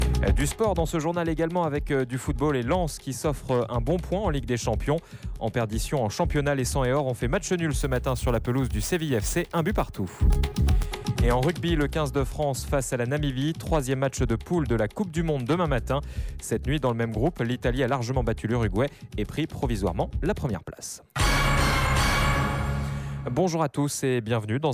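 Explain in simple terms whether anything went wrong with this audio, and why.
Crude rate conversion affects the stretch from about 7.81 to 10.87 seconds. Here the audio was switched to a different sample rate by simply repeating the nearest existing sample rather than smoothly recalculating new ones, in a way that fits a change from 32 kHz to 44.1 kHz. Those repeated steps fall in a regular pattern, creating extra tones that don't belong to the sound, heard as a gritty, fizzy buzz riding along with the louder and brighter parts.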